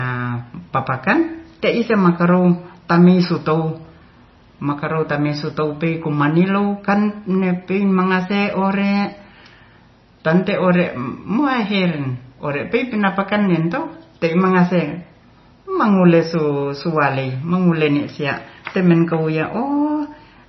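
From start to finish, the speech carries heavy coding damage, likely from MP3 compression at a low bitrate. Nothing sounds above about 5.9 kHz. The encoder has cut the treble at a fixed point to save bits. S sounds lose their edge and turn dull. Weak frequency lines drop in and out from frame to frame. That gives a watery, swirling texture under the speech. Consonant attacks smear. The damage points to a bitrate near 24 kbps.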